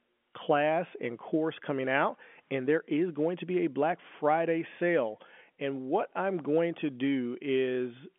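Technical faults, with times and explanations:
No technical faults detected.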